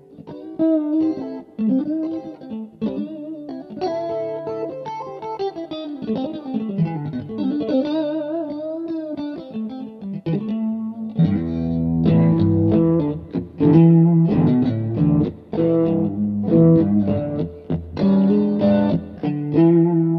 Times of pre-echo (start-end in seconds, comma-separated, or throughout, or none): none